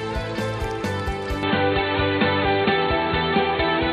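At 1.43 s the sound abruptly turns duller and boxier through to the end, likely an input switched to a poorer device. A spectrogram shows everything above 4.3 kHz cut off, with no silent gap; the waveform shows a modest level step and a faint new noise floor.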